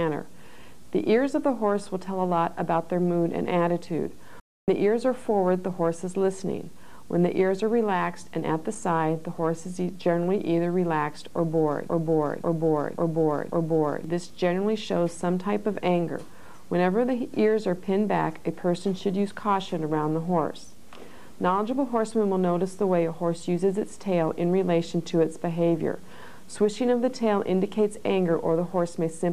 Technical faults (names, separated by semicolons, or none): playback stall; broken-record loop